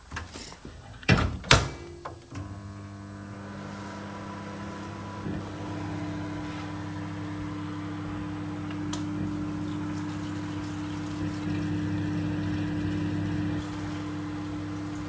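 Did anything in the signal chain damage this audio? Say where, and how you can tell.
No, nothing in the chain damaged this recording of everyday sounds. It has passed through a call path that is working as intended: the content stops sharply at 8 kHz, and the coding character fits a wideband G.722 codec running at around 64 kbps.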